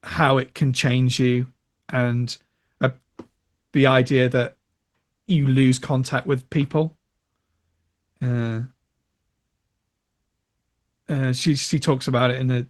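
No technical faults can be heard anywhere in this speech recording. It has come through a call path that is working as intended, with the usual coding texture and the top end limited to about 12 kHz, which fits an Opus call at around 24 kbps.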